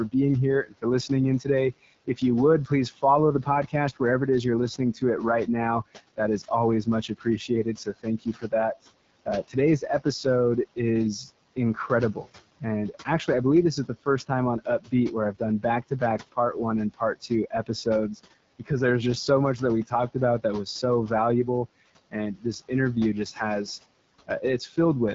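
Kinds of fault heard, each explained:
AMR wideband (HD Voice) codec: The speech has a rough, raspy grain throughout, and nothing is present above about 7.5 kHz. The codec models the voice as pulses driving a vocal tract filter up to 6.4 kHz and pads the top band with shaped noise. The harshness fits one of its two lowest modes, around 8.85 kbit/s, where too few bits remain to reproduce the voice cleanly.
Speech cut by the noise suppressor: Soft sounds and word endings keep fading out, as if swallowed. This happens through most of the first 18.7 seconds, adding up to around two seconds in total, with dips of up to about 18 dB. It happens again, more briefly, between 22.11 and 24.78 s, with dips of up to about 13 dB. The suppressor mistook these quiet speech parts for the room noise, which sits about 20 dB below the speech, and turned them down.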